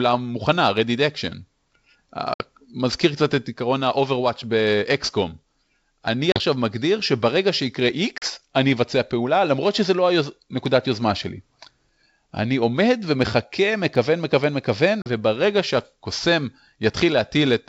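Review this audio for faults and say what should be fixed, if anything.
Packet loss on an ADPCM call cuts 60 ms at 2.34–2.42 s and 40 ms at 6.32–6.39, 8.18–8.24 and 15.02–15.06 s. Each gap shows as a flat waveform and a blank spectrogram column, then slightly distorted speech while the G.722 decoder's predictor resyncs. Prevent it with packet loss concealment.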